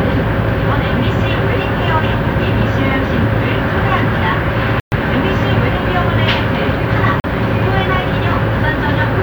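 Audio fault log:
4.80 s and 7.20 s, block of digital silence: the audio drops to silence for 120 ms, then 40 ms, likely as output samples went unfilled. Unlike a fade or level dip, the cut is instant and dead silent.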